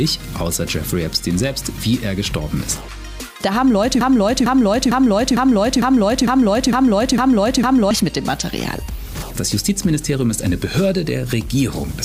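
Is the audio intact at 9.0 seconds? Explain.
Yes, the audio is intact at 9.0 seconds, with no dropout, click, distortion or other fault at that moment.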